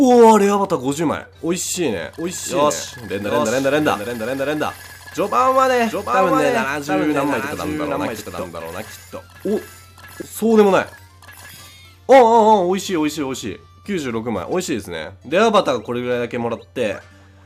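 A doubled audio track runs from 2.18 to 10.22 s: a second full-band copy trails the original by around 0.7 s, roughly 5 dB quieter, likely from a slower capture path. Unlike an echo, it doesn't decay or add room colour, and it starts and stops abruptly.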